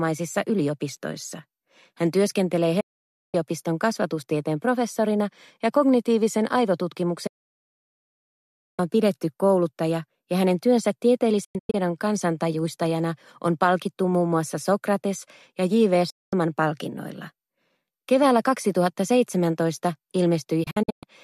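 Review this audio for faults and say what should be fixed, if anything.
The receiver lost its digital signal and muted until good frames returned, so the sound snaps to silence with a fast fade of about 8 ms in a digital broadcast dropout at 2.80–3.35 s, 7.27–8.79 s, 11.44–11.75 s (several short holes), 16.10–16.33 s and 20.63–21.03 s (again broken into short holes). To prevent it, improve reception with a better antenna, better aim or stronger signal margin.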